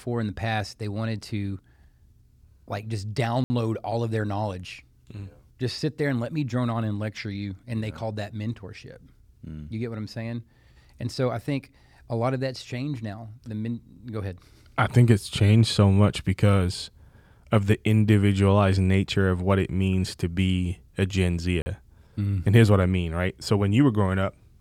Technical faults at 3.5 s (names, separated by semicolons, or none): block of digital silence